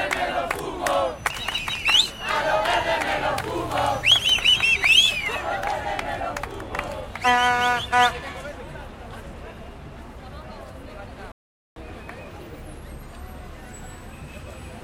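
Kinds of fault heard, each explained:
Playback stall: the sound just cuts out mid-flow at 11.32 s and stays silent for about 444 ms before picking up again at 11.76 s. The likely cause is the player running dry of data or its thread getting blocked briefly.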